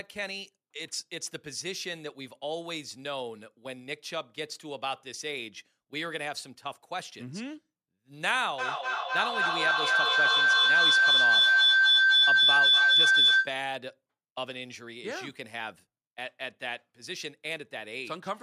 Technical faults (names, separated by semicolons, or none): feedback howl